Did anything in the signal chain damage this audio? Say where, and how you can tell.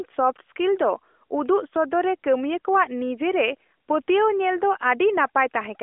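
No, nothing in the signal chain damaged this audio.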